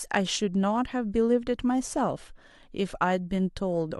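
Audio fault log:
No audible faults found anywhere in the speech recording.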